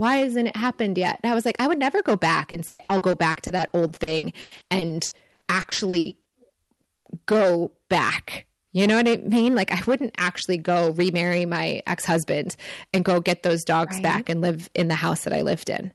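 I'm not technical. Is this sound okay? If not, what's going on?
No. Hard clipping runs through the whole recording. The speech was pushed louder than the system could carry, so the loudest moments, roughly one in twenty, get their tops sliced flat. You hear this as a harsh, crackly edge on stressed syllables.

There is also repeated packet loss (robotic sound) from 2.51 to 7.07 s, between "would never go back" and "go back". Dozens of brief dropouts, the longest 0.12 s, were patched by stretching the previous sound. That fills about 30% of this stretch and makes it choppy.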